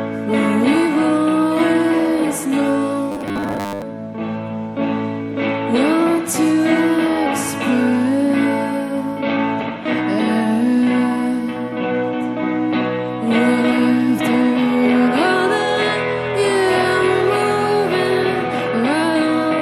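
From 3.12 to 3.82 s the audio turns into a rigid, metallic buzz at 100 Hz. This is robotic sound from repeated short buffers. The likely cause is a 10 ms chunk being replayed over most of that stretch, while the real audio is skipped.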